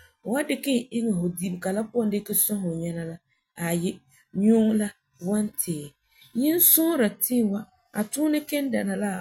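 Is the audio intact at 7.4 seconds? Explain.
Yes, the speech at 7.4 seconds is intact, with no dropout, click, distortion or other fault audible at that moment.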